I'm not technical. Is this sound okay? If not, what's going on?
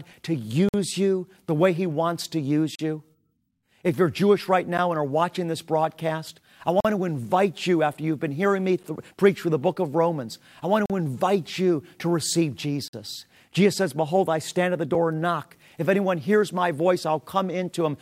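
No. The sound briefly cuts to dead silence seven times, at 0.69–0.74, 2.75–2.79, 4.78, 6.80–6.85, 8.83, 10.86–10.90 and 12.88–12.93 seconds. This is a gap between stream segments: the audio arrives in 2-second pieces, and their timings don't quite line up, so the player inserts short silences of about 10 to 50 milliseconds. Unlike a dropout, no sound is lost. It pauses and then resumes exactly where it left off.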